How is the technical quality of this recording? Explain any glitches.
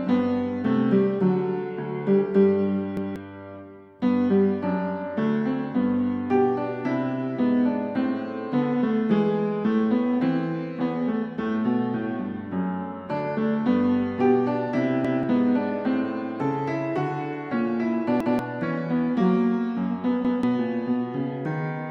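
Four glitches disrupt playback. Each is a repeated buffer, at 2.97, 15.05, 18.20 and 20.25 s: the player missed fresh data and replayed its last 0.19 s block (fitting an 8192-sample buffer), so that stretch of sound plays twice with a hard join. Unlike a dropout, nothing goes silent; a stutter repeats instead, skipping roughly a fifth of a second of audio.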